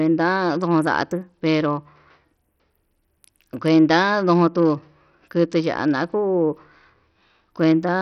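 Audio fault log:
throughout: Bluetooth SBC compression, likely with a bit pool too small for a rate near 64 kbps, so the weak top sub-bands starve and the rest are coarsely quantised. The speech turns heavily gritty with aliasing, treble flickers, and nothing remains above 15.4 kHz.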